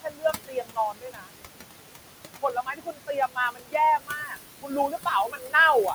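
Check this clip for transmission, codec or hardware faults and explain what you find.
The faults here come from processing rather than transmission or hardware: a noise suppressor both leaves artefacts and eats into the speech.

Noise suppressor artifacts run throughout. The suppressor pulls down bands it judges to be steady noise by about 21 dB, frame by frame. The room noise, sitting about 9 dB below the speech, sinks between phrases and rises under the speech.

Speech cut by the noise suppressor occurs at 0.0–1.33, 2.42–3.75, 3.98–4.38, 4.62–5.08 and 5.27–5.54 s. Quieter speech energy was mistaken for noise and lowered by about 22 dB in the first three spans, and by about 18 and 15 dB in the last two. Around a second of the sound in each of the first two spans is affected, and less in the later ones. Those stretches sound swallowed and faint.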